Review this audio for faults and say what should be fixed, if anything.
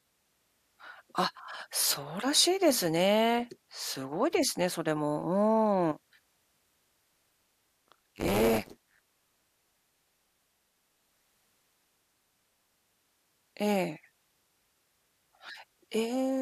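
Buffer tearing runs from 6.85 s to 12.86 s, heard as a steady robotic rattle at 100 Hz over the speech, present only while there is signal. The writer and the hardware reader of the ring buffer have drifted so they cross mid-period. About half of each period replays audio roughly 40 ms old, with hard splices at both edges. The buzz rate fits a 10 ms period. To prevent it, keep the write pointer a safe margin ahead of the read pointer and resynchronise on underrun.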